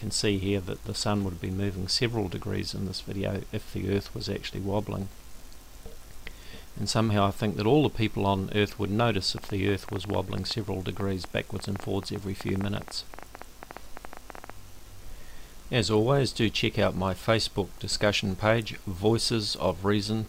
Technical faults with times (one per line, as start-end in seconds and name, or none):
9.38-14.51 train of clicks